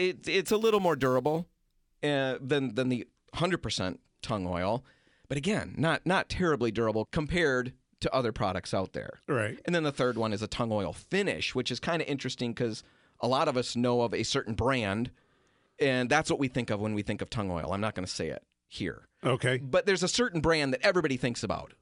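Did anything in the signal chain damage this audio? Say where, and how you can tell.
Yes: imaging from sample-and-hold upsampling, 0.48 to 1.98 s, in the rate-conversion stage. Raising 22 kHz speech to 48 kHz by repeating samples, unfiltered, left mirror copies between 11 and 22 kHz, about 25 dB down, heard as a metallic fizz tracking the speech.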